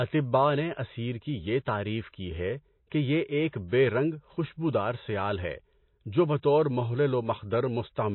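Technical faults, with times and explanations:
Throughout, MP3 compression: the speech has nothing above 4.1 kHz, and the damage is plainly audible as a watery, swirling texture, with metallic chirps on s sounds and onsets smeared. This likely comes from an MP3 encoder short of bits, which fits a low bitrate around 24 kbps. The encoder cuts the treble at a fixed point and drops weak frequency lines that flicker from frame to frame. Plain low-pass filtering would dull the sound without that swirl.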